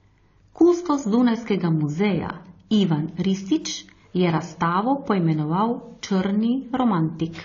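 Throughout, the speech sounds likely to have passed through transcoding between lossy codecs. Stacked compression artefacts blur together, and nothing remains above 6.9 kHz, pointing to a low-bitrate first encode.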